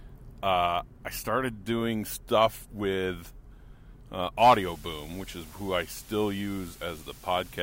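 From 4.39 s to the end, a constant, even hiss sits under the audio, roughly 25 dB below the signal, with no crackle, grit or harmonic distortion alongside it. That is the signature of low bit depth with dither: the signal has been rounded to very few levels, with a small random signal added first so the rounding error spreads into steady white noise instead of distortion. The noise level fits a reduction to about 7 bits.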